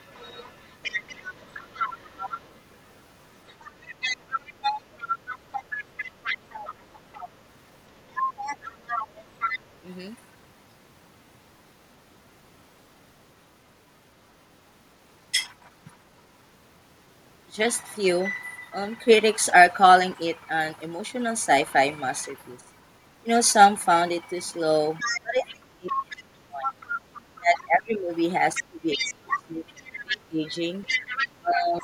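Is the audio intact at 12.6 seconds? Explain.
Yes, at 12.6 seconds the speech plays through cleanly, with no dropout, glitch or other audible fault at that moment.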